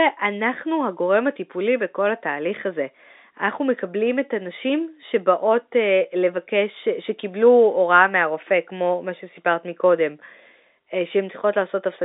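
No technical faults are audible.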